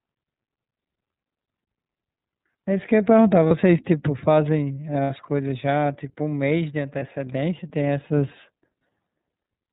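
Speech coded with the iLBC codec, and the coding damage is plainly audible. Nothing above 4 kHz survives, so the sound is narrowband, slightly rough and synthetic. The 30 ms frames and 13.33 kbps rate point to iLBC's lower-rate mode. Lost iLBC frames cause brief held, buzzy vowel sounds at 1.55, 3.48, 5.04, 6.99 and 8.78 s. Each gap lasts 30 ms, except 60 ms at 5.04 s. The decoder repeats the last pitch cycle with noise. Clarity returns almost immediately afterwards.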